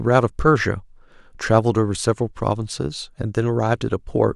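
Nothing in this speech recording stands out as a technical fault, so there's nothing to flag here.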